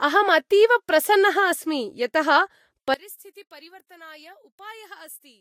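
From the start, the speech carries the smeared, watery texture of a low-bitrate encode, yet the file behaves like a generous MP3, and nothing is present above 16.6 kHz. The pattern fits low-bitrate audio saved at a high bitrate, likely a Vorbis encode at around 43 kbit/s re-saved as MP3 near 253 kbit/s. The second encode adds size but cannot rebuild what the first discarded, so the cut-off and artefacts remain.

At 2.94 s the level on a mono sum drops by about 24 dB and stays down to the end. The centred speech nearly disappears, leaving only a faint residue of what differs between the two sides. That is the signature of one channel inverted, likely a polarity flip on a single side from that point on: the material common to both channels cancels when they are added, and only the small inter-channel difference survives.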